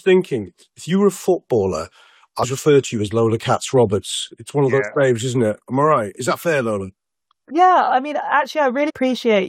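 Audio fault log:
2.43 s and 8.88 to 8.91 s, damaged data in a compressed stream: in two places, part of the encoded stream was corrupted, so the decoder could not read those frames properly and had to drop out of sync and search for the next valid frame header before decoding resumed. Each moment of misread or discarded data comes through as a short, unnatural glitch, about 20 ms long, breaking into the sound at both points.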